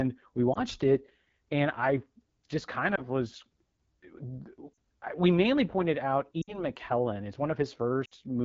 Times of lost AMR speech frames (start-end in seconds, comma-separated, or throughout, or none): 0.53-0.60, 2.96-3.01, 4.74, 6.41-6.59, 8.05-8.14